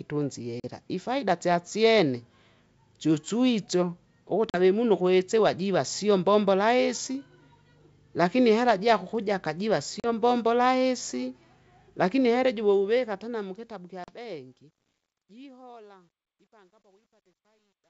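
At 0.60, 4.50, 10.00 and 14.04 s there is packet loss on an ADPCM call. Each gap is a hard-edged silence of about 40 ms, roughly two packets' worth. Because the decoder's adaptive predictor and step size keep running without the missing data, they drift away from the sender's. Speech comes back slightly distorted, and settles within a few tens of milliseconds. At 14.04 s that recovery stretches the disturbance to about 0.14 s.

From 12.39 s to the end, the speech fades out, but the fade shows truncation distortion. The gain stage keeps only 11 bits and adds no dither, so as the level falls the waveform collapses onto a few coarse steps. The tail turns gritty, and it is at its worst from about 14.85 s to 17.9 s.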